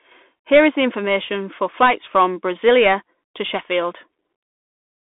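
Bluetooth CVSD headset codec damage, plainly audible, runs through the whole clip. The speech is squeezed into a narrow line band of roughly 200 Hz to 3.6 kHz, with nothing above 3.8 kHz, which fits CVSD at 64 kbit/s. That codec sends one bit per sample, saying only up or down, with an adaptive step. Fast, loud high sounds outrun the step and distort, s sounds turn scratchy, and a grainy hiss sits beneath the speech.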